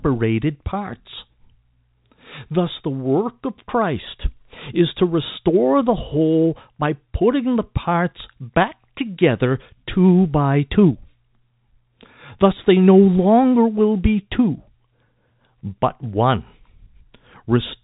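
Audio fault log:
No fault in this speech clip; it runs through G.711 telephone coding as intended.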